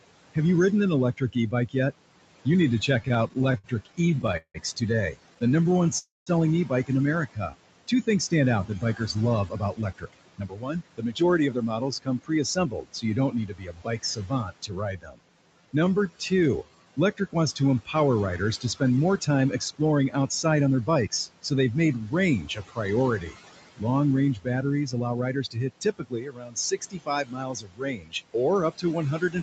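A speech recording over a call link, heard with room noise sitting about 14 dB under the voice and nothing above 8 kHz. Throughout, the background rises and falls in step with the talking, sinking by about 21 dB in the pauses. These are noise suppressor artifacts: the suppressor pulls down every band it judges to be steady noise, frame by frame. The same processing also produces speech cut by the noise suppressor. Just after "you ridden an", from 1.17 to 1.76 s, a fifth of a second or so of syllables is ducked by up to about 17 dB. From 2.45 s to the end, soft consonants and word tails keep getting swallowed, with drops up to about 22 dB, because the suppressor mistakes them for background. From 3.03 to 4.57 s the audio drags and hiccups in 20 small hold-ups, the longest 174 ms. Another ten brief ones follow between 5.34 and 5.97 s. These are repeated stalls (stutter): the jitter buffer kept running dry and the receiver stretched the last sound each time, so nothing is lost but the flow limps. 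Right after, at 5.98 to 6.30 s, the sound hangs as the last sound fades, then about 180 ms of silence before resuming where it stopped. That is a call audio freeze, likely from a burst of delayed packets. The talking then rushes at unchanged pitch, about 10 to 11 percent fast, at 9.15 to 12.74 s, 18.76 to 21.08 s and 24.81 to 25.48 s. This is jitter buffer speed-up, in which the receiver trimmed pitch periods to shed backlog. Between 15.21 and 16.86 s it drags to 88 percent with drawn-out sounds. That is jitter buffer slow-down, where the receiver repeated periods to rebuild its reserve.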